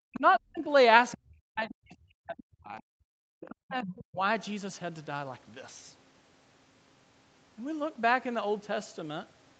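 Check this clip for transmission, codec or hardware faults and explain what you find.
The faults all come from echo cancellation on a call, not from the codec or hardware: the talker is repeatedly ducked, faint scraps of a second voice get through, and the room sound briefly drops out. The audio stops at 8 kHz, as expected for an Opus call at that bandwidth.

Speech suppressed in double talk, from 0.05 to 0.69 s, 1.16 to 2.83 s and 3.49 to 4.21 s: the talker's speech sinks, thins and breaks into pieces, falling by up to about 40 dB at its deepest, for well over a second in the middle stretch. The likely cause is the other party talking at the same time. The canceller could not tell the near talker from loudspeaker echo, so it turned everything down.

Other side's voice leaking through at 0.55 to 0.60 s, 1.11 to 1.18 s, 3.4 to 3.5 s and 3.84 to 3.94 s: short fragments of a second voice sit underneath. 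The first is the faintest, at around 35 dB below the talker. The later ones are clearer, the loudest at roughly 15 dB down. These are likely residual loudspeaker echo that the canceller failed to subtract from the microphone signal.

Background gated by the echo canceller from 3.11 to 3.21 s: the room tone suddenly vanishes for about a tenth of a second, dropping by about 40 dB, then snaps back. While the loudspeaker was active, the canceller clamped the microphone hard, and the ambience went with it until the canceller released.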